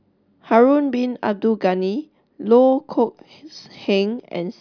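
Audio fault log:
No technical faults can be heard anywhere in this speech recording, and the signal stays steady and intact throughout.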